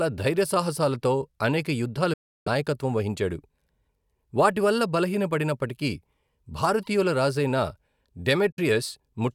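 Bluetooth dropouts at 2.13 to 2.48 s and 8.52 to 8.59 s cut the speech to silence, first for about 325 ms, then for about 46 ms. The likely cause is audio packets arriving at the headphones too late and being discarded, leaving a hole until fresh data came through. Each gap begins and ends abruptly or with a fade of a few milliseconds, and the speech picks up further along, as though it had kept playing during the silence.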